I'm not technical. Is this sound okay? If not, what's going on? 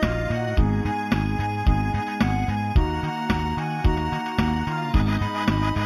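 No. Throughout the clip there is imaging from linear upsampling: the sound was raised from 8 kHz to 44.1 kHz by joining samples with straight lines. That dulls the top end and leaves faint mirror copies between 4 and 8 kHz, heard as a light metallic shimmer.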